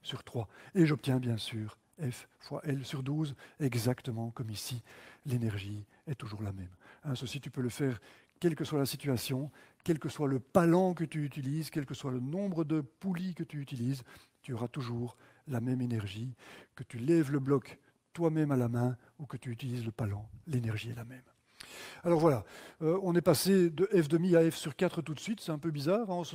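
No technical faults can be heard anywhere in the recording. Nothing in the sound calls for a timestamp or a description of something going wrong.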